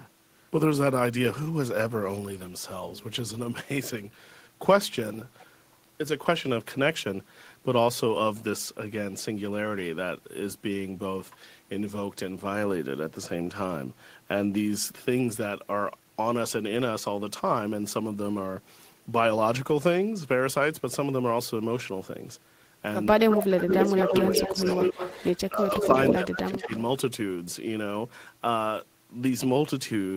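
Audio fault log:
23.07–24.99 s, 25.48–25.95 s, 26.13–26.72 s: speech suppressed in double talk. The voice dips by about 10 to 20 dB in short stretches. Both sides likely spoke at once, so the canceller ducked everything.
23.7–25.29 s, 25.57–25.88 s, 26.07–26.14 s, 26.62–26.82 s: echo leak. A copy of the voice returns about 180 ms late, near full level at first and later fainter. A loudspeaker echo likely slipped past cancellation.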